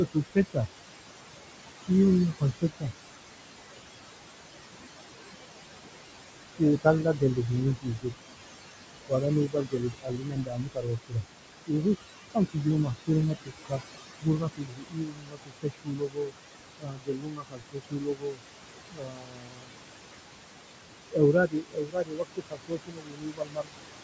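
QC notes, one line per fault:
throughout, noise suppressor artifacts: the room noise drops by about 21 dB in pauses and swells back under speech, because the suppressor gates noise-like bands frame by frame.
0.14–0.68 s, 1.87–2.86 s, 6.58–8.14 s, 9.07–19.73 s, 21.12–23.84 s, speech cut by the noise suppressor: soft speech sounds turn faint or swallowed, up to about 22 dB down, because the suppressor mistook them for noise. The longest stretch, 9.07–19.73 s, loses several seconds in total.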